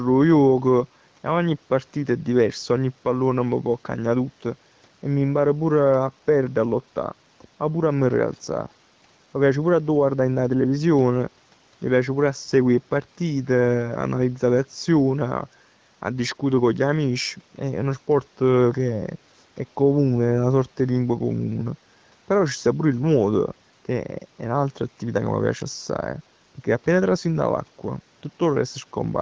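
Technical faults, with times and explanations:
No technical faults are present; the band limit at 8 kHz and the light coding of the AMR wideband (HD Voice) codec, at a rate that fits about 16 kbit/s, are normal for a call path.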